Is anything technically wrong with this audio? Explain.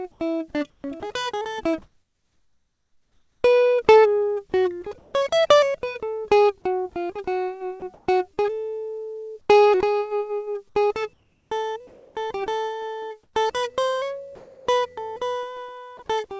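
Yes, a voice detector in the call chain keeps mistaking this music for background. Chopping shows up at 0.12–5.14 s, 7.80–9.49 s and 11.13–14.67 s, likely from the detector toggling transmission, so stretches get swapped for comfort noise, about 2 s in the first, 0.27 s and 1.1 s later, and the music flickers in and out. There's also one sound dropped by the voice detector at 15.97 s, likely the detector taking the music for background, where about 20 ms is replaced by steady comfort noise before the music resumes. The G.722 call path itself caps everything at 8 kHz, so the top end sounds dull.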